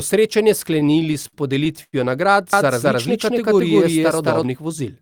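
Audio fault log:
0.73–1.95 s, repeated stalls (stutter): twelve brief hold-ups, the longest about 96 ms, filled by stretching the last sound as the jitter buffer kept emptying; nothing lost, but the speech drags.
2.53–4.43 s, doubled audio track: a second full-band copy at roughly equal level trails by about 200 ms with no room colour, likely a slower duplicate capture path, starting and stopping abruptly.
3.25–3.91 s, jitter buffer slow-down: the speech runs at 95% speed with unchanged pitch, adding 41 ms as repeated pitch periods rebuild the buffer reserve, drawing sounds out.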